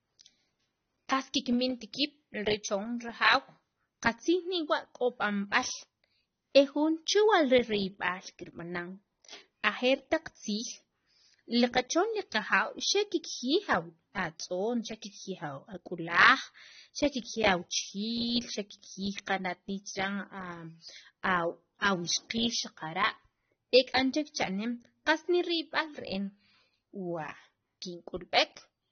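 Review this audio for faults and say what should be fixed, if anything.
AAC compression damage runs throughout the speech. Nothing is heard above 6.3 kHz. Sibilants sound smeared and fizzy. This likely comes from a low-bitrate AAC-LC encode, around 24 kbps. Encode at a higher bitrate, or keep an uncompressed master.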